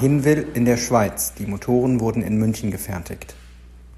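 A steady low drone sits under the speech from start to finish, a fixed tone at 60 Hz with a buzz of low harmonics above it, about 25 dB below the speech level. This is mains hum: power-line current has leaked into the signal path, most often through a ground loop between connected equipment or by induction from a nearby transformer, and it rides along at the supply frequency.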